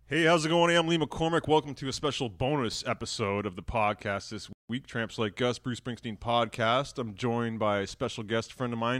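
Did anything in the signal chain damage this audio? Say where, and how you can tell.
Yes: there's a playback stall in this speech clip. Right after "of the podcast this", the audio drops out from about 4.53 to 4.69 s, a gap of roughly 166 ms, with the speech stopping in mid-flow rather than at a natural pause. That points to the playback stage: the player likely either ran dry of buffered data or had its output thread blocked, so it went silent until it caught up.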